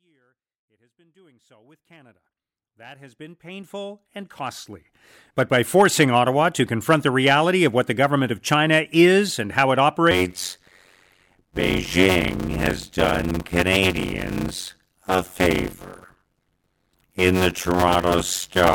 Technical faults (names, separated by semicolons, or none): block size mismatch (padded)